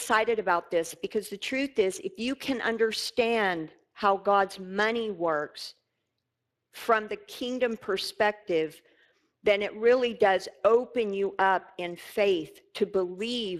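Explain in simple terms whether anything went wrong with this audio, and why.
The speech sounds rough and clearly hoarse from start to finish, with a grainy, noisy edge on every syllable. Nothing at all comes through above about 15 kHz. This is Speex codec damage. Speex is an older speech compression method used in internet calls and game chat. It rebuilds the voice from a simplified model and a limited stream of detail, and here that detail is too thin to sound clean, so the rasp runs through the whole clip.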